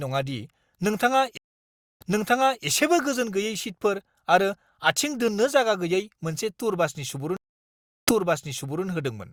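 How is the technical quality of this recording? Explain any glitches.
The recording has two stream reconnect glitches. At 1.37–2.65 s and 7.37–8.85 s the connection dropped and the player restarted its decoder. Each leaves a gap of about 0.63 s and 0.70 s, then the speech resumes 0.64 s and 0.78 s earlier, repeating material.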